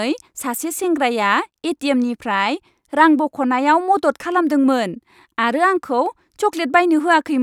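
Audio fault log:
No faults appear in this audio fault log.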